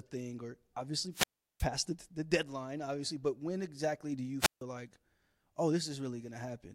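Speech with two wireless microphone squelch dropouts: after "thing or" (1.11 to 1.68 s, about 0.37 s muted) and after "when exactly do you" (4.40 to 4.62 s, about 0.15 s muted). Rising hiss before each silence marks a fading FM signal, not a digital packet-loss gap.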